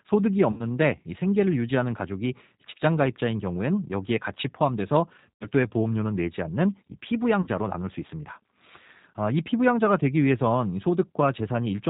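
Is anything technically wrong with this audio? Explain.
Yes. The speech runs through the G.729 codec throughout, and its damage is plainly audible. At 8 kbit/s, in its G.729A form, each 10 ms frame is rebuilt from a vocal tract filter, a pitch predictor and a few pulses. The result sounds rough and synthetic, and a spectrogram shows nothing above 4 kHz.

VoIP packet loss concealed by the speech codec occurs three times. The first, from 0.52 to 0.68 s, loses about 70 ms scattered over 80 ms, with a longest gap of 50 ms. The others span 5.34 to 5.47 s (90 ms) and 7.42 to 7.49 s (40 ms). The decoder repeats its last pitch and filter at falling gain, giving a buzzy tone or coloured noise that fades. On a spectrogram this looks like a smeared stretch, and on a waveform like a decaying envelope that stays weak briefly afterwards.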